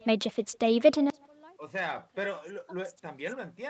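Echo with no canceller runs through the whole of this speech clip. Every phrase is followed roughly 150 ms later by a faint, thin copy at about 28 dB below the direct sound. That points to a far end playing the call through a loudspeaker, its microphone picking it up again, and nothing stripping that return before it travels back across the network. From 1.1 s to the end, the level collapses by about 32 dB, leaving only a weak residue. The likely cause is one channel inverted: with one stereo side's polarity reversed, the centred speech cancels when the two sides are folded to mono, and only their small differences survive. Both problems sit on top of a call path whose audio stops at 8 kHz, consistent with a wideband Opus stream at around 32 kbps.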